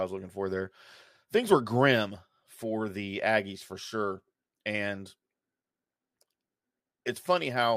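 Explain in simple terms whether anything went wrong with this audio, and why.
Nothing went wrong here.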